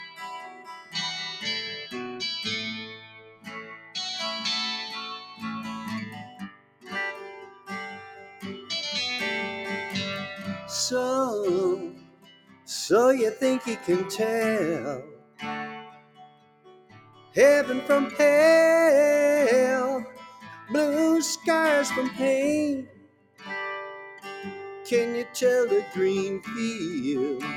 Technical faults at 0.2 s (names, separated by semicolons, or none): noise suppressor applied to music or sounds; sound cut by the noise suppressor